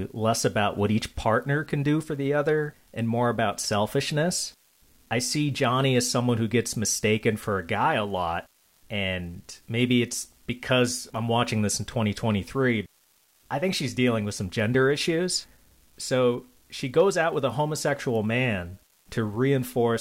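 Throughout the speech, an unreliable data bit on one marginal data line flips at random, adding identical steps of about -46 dBFS. Unlike smooth hiss, it is a steady gritty crackle, and unlike clicks from dropouts, it persists evenly through pauses.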